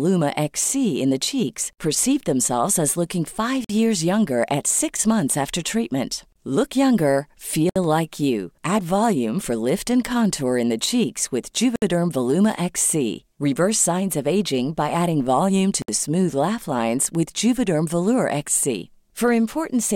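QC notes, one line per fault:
3.64, 7.69, 11.76 and 15.82 s, gap at a join of encoded pieces: 50 to 64 ms silences every 4.0 s, from encoder delay and end padding left untrimmed. They show as flat waveform breaks and blank vertical spectrogram stripes with smeared edges.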